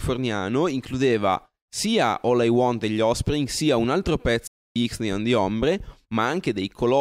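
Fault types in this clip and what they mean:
Playback stall: the speech cuts off abruptly at 4.47 s and the output stays silent for about 0.28 s, until 4.76 s, before carrying on. The likely cause is the player running short of data or its thread being held up. On the waveform this is a flat, near-silent gap with hard edges. On the spectrogram it is a clean vertical band of empty time across all frequencies, with no fade on either side.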